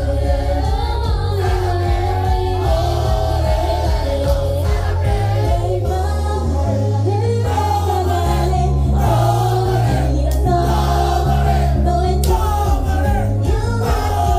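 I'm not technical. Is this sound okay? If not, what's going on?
Yes, this sound is okay. Nothing in it points to a problem with how it was recorded or passed along, so there is nothing here that needs fixing.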